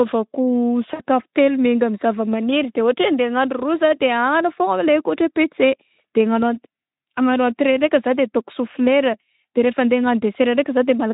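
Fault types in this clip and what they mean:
VoIP packet loss concealed by the speech codec: at 0.93 s, 60 ms drops out and the decoder fills it with a fading buzzy tone or coloured noise before "telo miainga".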